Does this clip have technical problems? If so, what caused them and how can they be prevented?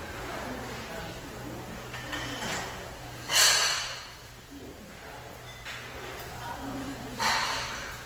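Yes, throughout: the sound turns grainy and rough, with tones going noisy rather than swirly, and the band still reaches about 20.1 kHz. That's likely Opus compression in its music mode, and the damage points to a starved bitrate around 16 kbps. Encoding at a higher bitrate would prevent it.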